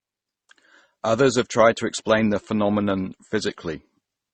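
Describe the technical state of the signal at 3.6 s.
At 3.6 s, as throughout, the speech sounds dull, with nothing above 8.4 kHz and several kinds of smeared, swirly artefacts stacked together. The likely cause is transcoding between lossy codecs, a chain that fits MP3, then Opus, then AAC. Each pass encodes the previous one's artefacts and adds its own, and the lowest cut-off in the chain remains.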